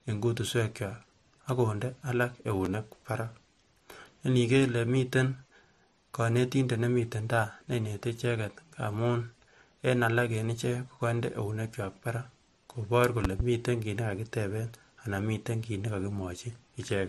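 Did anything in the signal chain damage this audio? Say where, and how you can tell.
Yes. Throughout the 17-second speech clip, nothing reaches above 14 kHz, and the artefacts of two different codecs are heard together. That points to the codec stage, most likely transcoding between lossy codecs. The sound fits an MP3 at around 46 kbit/s later re-encoded as AAC-LC at 64 kbit/s. The second encoder wasted bits reproducing the first one's damage, added its own, and kept the lower cut-off.

Two loud pop events sit on top of the speech, which continues underneath. A single sharp pop at 2.65 to 2.68 s peaks about 10 dB above the speech. From 13.25 to 13.43 s comes a double pop about 15 dB above it. The abrupt onsets and short decay point to the analogue wiring stage, where a likely voltage step from a connector, switch or static discharge entered the line. The circuitry after it shaped that step into a brief thump.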